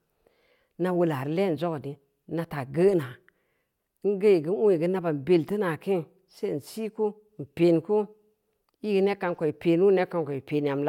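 No technical faults can be heard in this speech recording. There is nothing here that needs a time or a value marked against it.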